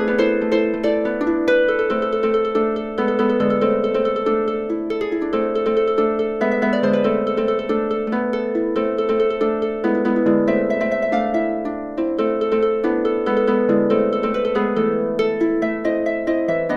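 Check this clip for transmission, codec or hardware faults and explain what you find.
No transmission, codec or hardware faults can be heard anywhere in the clip, and the signal stays steady and intact throughout.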